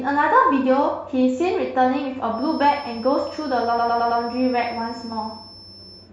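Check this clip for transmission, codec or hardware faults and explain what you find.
Two faults are audible in this speech clip.

From 2.29 s to the end, a feedback whistle sits at 5.3 kHz, about 20 dB below the speech. It is a thin tone at one pitch that swells and fades slowly in level. The likely cause is a loudspeaker-to-microphone loop held right at the edge of feedback, sustaining one frequency without running away.

From 3.78 s to 4.20 s, repeated frames cause a stutter. A 106.7 ms stretch plays again four times. This fits a compressed block being sent or written more than once. The clip gains 426.7 ms.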